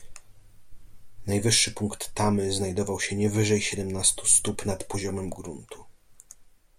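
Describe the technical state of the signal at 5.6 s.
At 5.6 s the speech signal is intact, with no audible fault at that point.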